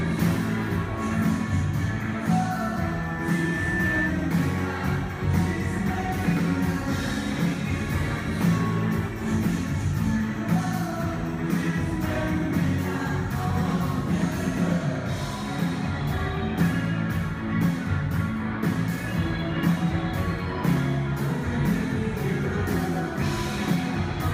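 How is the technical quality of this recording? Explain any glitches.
The recording has one clear fault. From 2.56 to 4.15 s, loudspeaker feedback squeal: a 1.8 kHz tone swells over about a second and a half until it is as loud as the sound, as the microphone re-amplifies its own speaker. Unlike a steady interfering tone, it grows on its own.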